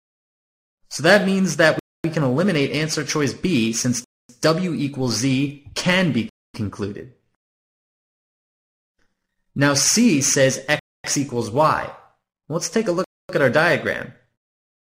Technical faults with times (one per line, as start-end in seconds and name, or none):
1.79-2.04 gap between chunks
4.04-4.29 gap between chunks
6.29-6.54 gap between chunks
10.79-11.04 gap between chunks
13.04-13.29 gap between chunks